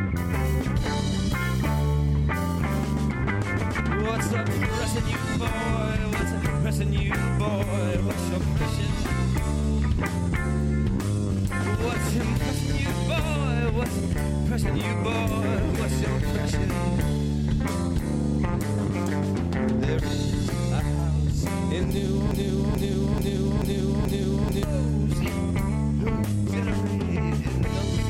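A broken-record loop runs from 22.31 s to 24.63 s: a fragment about 0.43 s long plays five times back to back, each pass identical, so the sound stutters in a rigid, mechanical rhythm instead of moving forward. The likely cause is a stall somewhere in the playback or streaming chain, which kept resending the last piece it held. Whatever audio belonged in those two-odd seconds is gone, replaced by the repeats.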